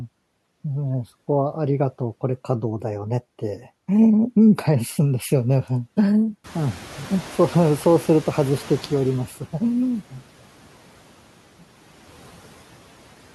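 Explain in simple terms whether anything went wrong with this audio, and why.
Two things go wrong here, both from the noise suppressor. At about 6.5 s the room noise gets suddenly louder, and the suppressor is caught off guard. This is the noise suppressor catching up: from 6.44 s to 9.29 s the new background comes through stronger than it should, then gradually sinks as the suppressor spends nearly three seconds learning what the new noise sounds like and how much to remove.

Right as it finishes adjusting, between 9.28 s and 9.61 s, there's a case of speech cut by the noise suppressor. It mistakes a small bit of the speech for noise and turns it down too. Only a brief moment is affected, but a soft sound or word ending there comes out faint and a little swallowed, as if the speaker trailed off.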